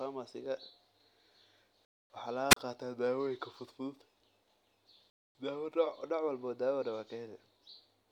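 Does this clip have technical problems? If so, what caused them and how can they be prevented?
Yes. Gaps between chunks occur at 1.85 to 2.1 s and again at 5.1 to 5.35 s. Each is a 250 ms hole of silence with abrupt edges, and they fall at a spacing that fits the audio being delivered in 3-second chunks. The player or decoder leaves dead time at each join, through padding or a late start on the next chunk, so the speech halts there without anything being lost. Prevent this with gapless playback, buffering the next chunk ahead of time and trimming codec padding at each boundary.

A wireless microphone squelch dropout is heard from 2.5 to 2.57 s. The FM radio link from the microphone weakens, hiss briefly rises, and the receiver's squelch mutes the output for about 35 ms, leaving a near-silent hole before the speech returns. The fade in signal strength, not the recording chain, causes the drop. 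Prevent it with clear line of sight, correctly placed receiver antennas, diversity reception, a fresh transmitter battery and an interference-free frequency.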